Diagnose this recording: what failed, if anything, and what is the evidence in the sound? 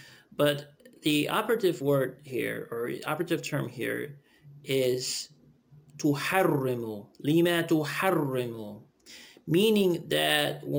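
Imaging from sample-and-hold upsampling runs throughout, at the sample-rate conversion stage. A metallic fizz between 12 and 24 kHz, about 22 dB below the signal, follows its level. The rate was doubled from 24 to 48 kHz by repeating samples without smoothing, leaving mirrored spectrum copies.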